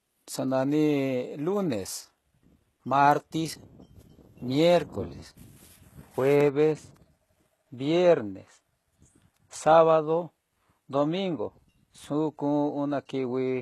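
From start to finish the speech carries HE-AAC compression damage, and it's plainly audible. Nothing sits above about 12.3 kHz, yet the top end is still filled in. That points to spectral band replication faking the treble from copied lower bands, likely at a low rate around 16 kbps. Because that rebuilt treble isn't the real thing, the s sounds come out gritty and lispy, with a metallic edge where the copied bands don't line up.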